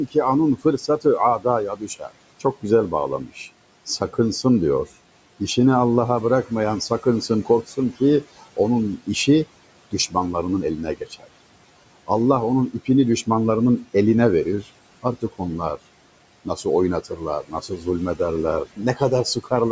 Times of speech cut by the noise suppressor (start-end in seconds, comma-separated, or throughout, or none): 0.08-4.45, 6.48-10.15, 10.77-11.28, 14.62-15.78, 16.45-19.52